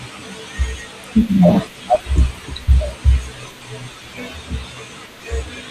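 DAB burbling at 1.55 to 2.09 s and 4.61 to 5.05 s: bit errors slip into the MP2 data, putting short blips of noise into single sub-bands, so the speech burbles.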